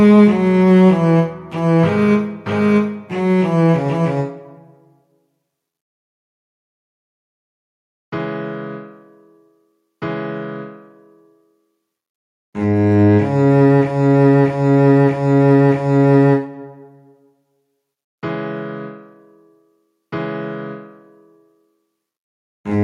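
No technical faults turn up anywhere in the recording: the signal stays continuous and steady, with no interruptions, level problems or added disturbances.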